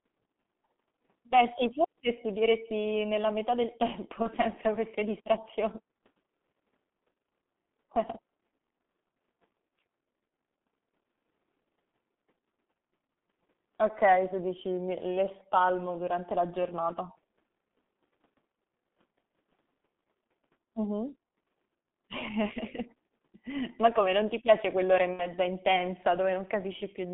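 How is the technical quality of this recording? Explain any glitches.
Technical quality is poor, with heavy coding damage throughout and two brief dropouts. G.723.1 codec: audio is confined to 200 Hz–3.5 kHz, muffled and hoarse with smeared consonants, consistent with about 6.3 kbit/s coding in 30 ms frames. VoIP packet loss concealed by the speech codec: at 4.22–4.34 s, after "studieresti nella metà del" and before "queste distrazion", the decoder extrapolates from its last frame into a sound that fades, which fits one lost 30 ms frame. At 25.13–25.34 s, after "ti piace quell'ora e", the same effect runs longer, which fits two lost frames.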